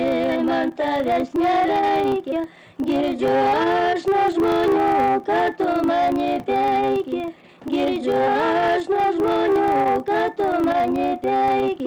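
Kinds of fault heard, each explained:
Filter restarted on every block: the filter drops its state at each block boundary, so small start-up transients form a 25 Hz buzz that follows the signal level throughout.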